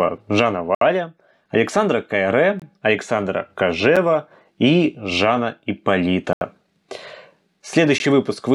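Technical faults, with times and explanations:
0.75–0.81 s, 2.60–2.62 s, 3.96 s, 6.33–6.41 s and 7.98 s: block of digital silence. The speech drops to silence five times, with no fade in or out. The gaps at 0.75 s (64 ms) and 6.33 s (80 ms) sound like short holes. The 23 ms gap at 2.60 s fits a 1024-sample buffer that was not filled in time. The 7.7 ms gap at 3.96 s sounds like a tick, and the 16 ms gap at 7.98 s is just long enough to be heard as more than a tick.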